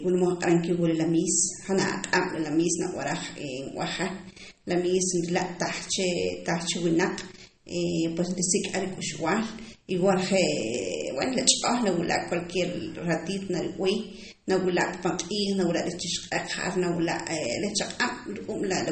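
From start to finish, the speech has a dull, watery quality. Nothing is heard above about 8.4 kHz. The treble is cut off cleanly at that point. The s sounds turn swirly and metallic. Quiet detail seems to flicker in and out. These traits likely come from MP3 compression at a low bitrate, perhaps around 32 kbps. With so few bits, the encoder drops the top band. It also discards weak frequency components from frame to frame, and that causes the warble.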